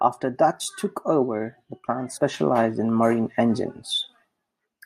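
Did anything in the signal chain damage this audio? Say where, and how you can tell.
Yes, at 2.16–2.18 s, between "took over the plant" and "in marine", the speech jumps ahead about 40 ms: roughly two compressed frames skipped at the codec.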